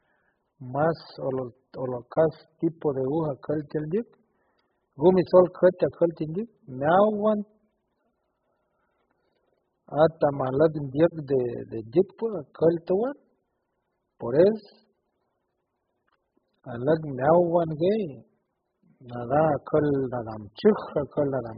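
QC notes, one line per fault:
Throughout, likely AAC compression: speech sounds dull and smeared, with a warbling, fizzy texture on sibilants and nothing above 5.1 kHz. A spectrogram shows a flat ceiling at 5.1 kHz, which fits AAC-LC at a low bitrate near 8 kbps.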